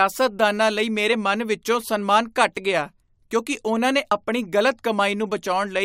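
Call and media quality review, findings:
Damaged data in a compressed stream at 4.10 s, just after "ਗਿਆ ਕਿਉਂਕਿ ਉਨ੍ਹਾਂ ਨੇ". Short glitch cutting into the speech, roughly 12 ms. Probable component: the compressed stream feeding the decoder. Corrupted bytes in a frame make the decoder misread it, lose sync and resync at the next frame header. Spectrogram: narrow vertical break in the speech harmonics. Waveform: brief disruption that doesn't match the surrounding envelope.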